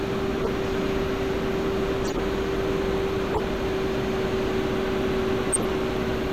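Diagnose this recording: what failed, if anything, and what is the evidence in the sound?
The failure is in the codec stage: corrupt frames were decoded. Brief chirps or bursts of misplaced noise occur at 0.40–0.47, 2.04–2.20, 3.32–3.39 and 5.53–5.65 s, each spanning a few frames. Flipped bits gave wrong gains and codes. Peaks reach about −15 dBFS, and about −10 dBFS in the last burst.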